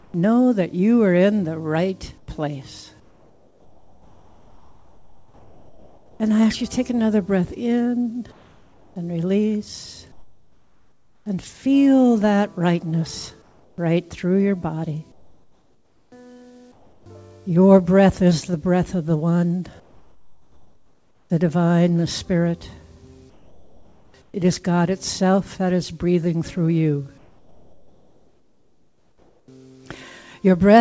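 At 0.00–0.14, 2.18–6.20, 8.32–11.26, 13.42–13.78, 15.12–17.06, 19.80–21.30, 23.30–24.34 and 27.18–29.48 s, comfort noise in place of the background, likely from discontinuous transmission, replaces real ambience with steady, featureless hiss, about 4–7 dB quieter at 0.00–0.14, 13.42–13.78, 19.80–21.30 and 27.18–29.48 s. It appears as flat, uniform spectrogram texture, with nothing above 8 kHz.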